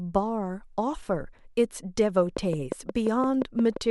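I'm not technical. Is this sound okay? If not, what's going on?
No. From 2.37 s to the end, steady ticking, 5.75 clicks a second, sits over the speech: a train of clicks, likely from equipment interference.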